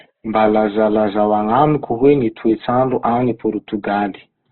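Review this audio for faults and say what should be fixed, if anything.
Throughout the speech, the sound is rough and grainy, with nothing above 4.3 kHz. This is likely Opus compression in CELT mode, filling bit-starved bands with folded or noise content. The narrowband cut-off fits a rate near 12 kbps. Encode at a higher Opus bitrate to keep full bandwidth.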